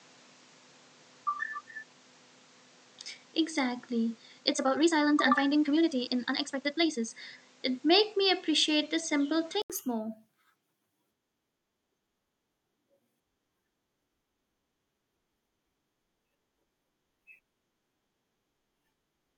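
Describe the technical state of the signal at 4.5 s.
At 4.5 s two things overlap. The whole stretch from 0.0 to 9.70 s sounds like an input switched to a poorer device, most likely a fallback mic or a headset's call profile. It passes a narrower band, so it's dull and a bit boxy, with the device's own background noise sitting roughly 30 dB under the signal. Around 9.70 s there's an 80 ms gap, after which the level shifts by something like 5 dB and the top end opens up.

On top of that, 4.5 s falls inside a time-stretched section running from 4.36 to 7.14 s, sped up 1.88 times. It's likely software squeezing that chunk to fit a target length. It keeps the pitch steady by dropping short slices, so the pace jumps abruptly while the pitch stays put. The result is rushed.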